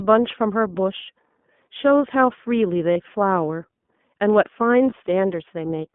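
The whole clip is speech carried through the iLBC codec. The band runs from about 150 Hz to 3.5 kHz, so there is no air or sibilant sparkle above that. iLBC codes each 20 ms frame on its own, shaping an excitation signal rather than the waveform itself. The damage is plainly audible. The speech sounds thin, slightly rough and synthetic, which fits the 15.2 kbps mode.

The first lost iLBC frames fall at 2.92 to 2.97 s. About 40 ms is missing, which points to two lost frames. The decoder repeats the last pitch cycle, mixed with noise, so the gap comes out as a brief held, buzzy vowel. A second, shorter loss at 4.90 to 4.94 s sounds the same. It fits a single 20 ms frame. Because frames stand alone, the speech snaps back at once after each gap.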